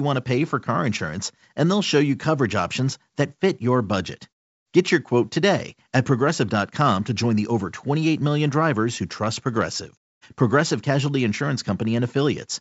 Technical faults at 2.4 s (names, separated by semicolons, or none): none